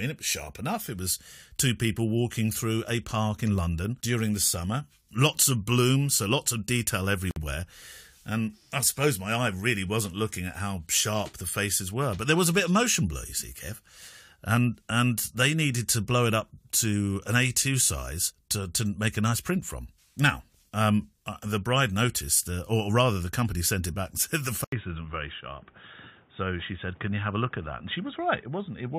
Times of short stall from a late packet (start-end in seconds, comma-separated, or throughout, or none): none